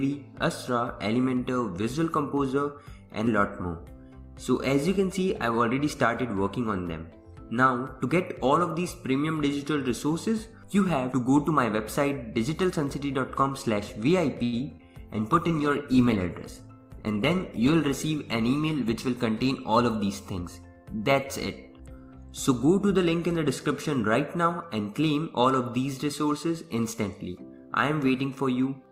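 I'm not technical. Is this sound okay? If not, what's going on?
No. Around 14.4 seconds the connection hiccuped, and the quality then dropped for several seconds.

Short stall from a late packet: from 14.43 to 14.55 s, a piece of audio arrived late and the receiver had nothing ready to play. It stretched the last sound for about 90 ms until the piece came, so nothing is lost, but that moment drags with a slight buzz or dip.

Short concealed packet loss: at 14.59 to 14.61 s and again at 14.77 to 14.89 s, small pieces of audio never arrived. The receiver patched each hole by continuing the sound just before it, which you hear as a quick smear or wobble where a tiny bit is missing.

Call bitrate drop: from 15.13 to 20.18 s the connection looked weaker, so the sender squeezed the audio into much less data, at its worst for nearly 3 seconds. The sound turns rough and muffled until it recovers.

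Jitter buffer speed-up: from 16.49 to 17.37 s, the receiver had built up too much delay and caught up by cutting out tiny slices, about a tenth of a second in all. That stretch plays roughly 9% fast at the same pitch and sounds rushed.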